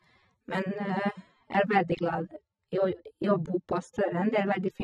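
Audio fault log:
Throughout: low-bitrate audio saved at a high bitrate. The speech carries the artefacts of a heavy encode, which fits a source of around 24 kbit/s AAC, likely re-encoded as 320 kbit/s MP3. The larger file cannot restore the detail the first encoder discarded.
0.62 s to 4.83 s: de-emphasis applied wrongly. A treble cut meant to reverse pre-emphasis acts on audio that never had it, or acts a second time, tilting the response smoothly downward to about 14 dB below 1 kHz at 10 kHz, so the speech turns dull and muffled.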